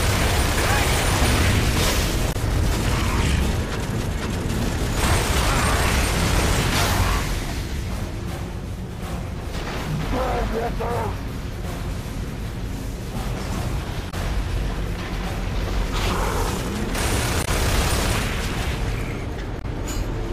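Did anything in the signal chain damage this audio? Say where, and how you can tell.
Yes. The damage sits at the codec stage, as damaged data in a compressed stream. Four short bursts are audible, at 2.29–2.36 s, 14.07–14.14 s, 17.41–17.48 s and 19.58–19.65 s. Each lasts about 70 ms. At each spot, some of the compressed bytes were corrupted. The decoder misread those frames, lost sync and produced garbage until it locked onto the next valid frame header.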